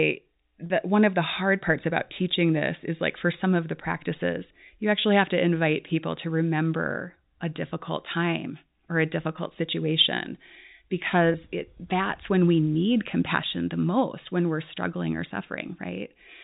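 At 0.66 to 0.70 s, just before "one of", packet loss with pitch repetition bridges a 40 ms gap, which fits two 20 ms packets. The last pitch period repeats briefly, giving a held, buzzy sound. At 11.32 to 11.34 s, a 20 ms loss repeats more briefly, through the 4 kHz telephone band of G.711.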